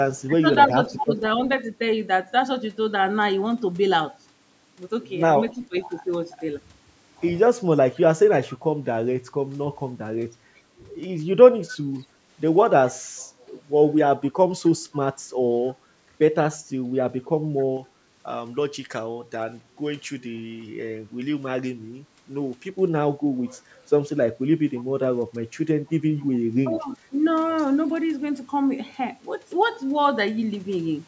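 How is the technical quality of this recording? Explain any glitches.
The speech carries three faults: echo leaking back, the talker being turned down while both sides speak, and a stretch of over-bright treble.

Echo leak appears at 0.07 to 1.25 s, 11.69 to 11.77 s, 14.94 to 17.65 s and 24.75 to 26.94 s. A faint copy of the speech trails the original by 266 ms, at about 30 dB below it in the first and last stretches, about 25 dB below at 14.94 s, and about 15 dB below in the brief burst at 11.69 s. The likely cause is a loudspeaker on the far end whose echo canceller let part of its microphone pickup return. On a spectrogram, each syllable's harmonic pattern reappears fainter and shifted right by roughly a quarter second.

Speech suppressed in double talk occurs at 0.27 to 1.11 s and 5.55 to 5.76 s. The talker's level dips by about 10 dB in the first span, totalling around a fifth of a second, and by about 15 dB in the second, lasting around 150 ms. 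These dips are likely caused by the echo canceller mistaking overlapping speech for echo and pulling everything down. The waveform envelope shows short, sudden notches in otherwise steady speech, and the spectrogram shows matching pale vertical gaps.

Pre-emphasis left on runs from 17.77 to 22.70 s. A J.17-style treble boost was applied without its matching cut, a curve that rises about 11 dB at 10 kHz relative to 1 kHz. Because the call path's microphone processing carries nothing above 8 kHz, the audible lift sits in the upper few kHz below that limit. The speech sounds thin, brittle and hissy on sibilants. A spectrogram shows the upper band noticeably darker for those five seconds than on either side.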